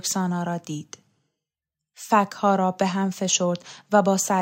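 Nothing stood out on listening to this speech recording.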